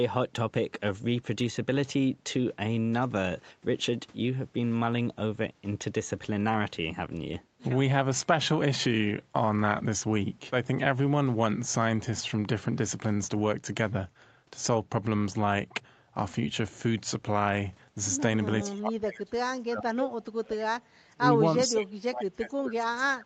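Speech suppressed in double talk hits the last stretch of the clip four times: 18.64 to 20.01 s, 20.32 to 20.73 s, 21.06 to 21.35 s, and 21.67 s through to the end. Each time the speech sinks about 35 dB, about 40 dB in the second burst. The likely cause is an echo canceller, unable to separate the near talker from loudspeaker echo during simultaneous talk, pulling everything down.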